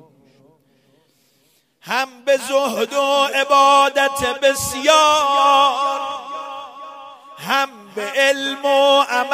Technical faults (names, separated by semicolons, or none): none